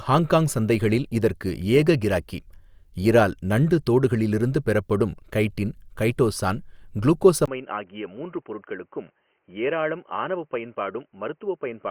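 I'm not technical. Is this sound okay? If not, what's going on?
No. From about 7.46 seconds to the end, the input switched to a poorer device. After a brief gap of about 20 milliseconds, the speech turns dull and boxy, with nothing above roughly 3.1 kHz, and it gets noticeably quieter, with faint new background noise underneath. The recording likely jumped from the original microphone to a lower-quality one, such as a headset in call mode, which carries less of the crisp detail.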